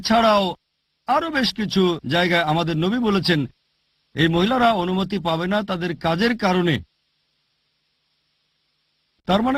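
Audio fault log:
No faults heard.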